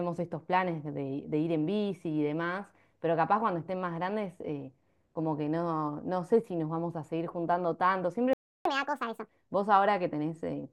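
It's a speech clip, and around 8.33 s the audio just drops out for about 0.32 s, a playback stall, likely the player starving for data or its thread getting blocked. It picks up again at 8.65 s, and then you get catch-up at higher speed: from 8.65 to 9.29 s it runs 1.5 times fast, with the pitch jumping up by roughly seven semitones, as the player burns through the backlog it built up during the gap before settling back to normal.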